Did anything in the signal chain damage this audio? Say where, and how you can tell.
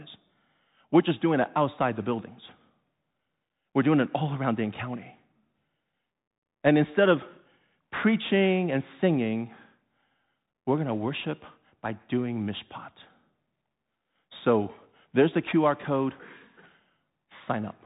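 Yes. Throughout the speech, nothing survives above about 3.8 kHz, sibilants sound scratchy, and a granular hiss sits underneath. That points to the codec stage: a Bluetooth CVSD headset codec, whose one-bit up/down steps at what fits a 64 kbps link can't keep pace with loud high-frequency detail.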